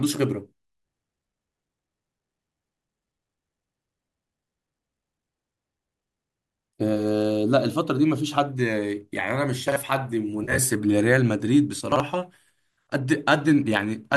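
At 9.68 to 9.76 s, a 40 ms chunk was written one chunk late and plays after the one that should follow it. These chunks out of order cause a brief jumbled hitch in the speech. The same fault recurs at 11.92 to 12.0 s, where another 40 ms chunk lands one step late.

From 10.44 to 10.59 s comes AAC frame loss with concealment. About 80 ms of frames went missing, scattered over 140 ms, with the longest gap roughly 40 ms. The decoder filled the holes from the last good spectrum, leaving a smeared, noisy, phasey patch rather than silence. A light graininess runs through the whole clip, likely from low-delay AAC compression.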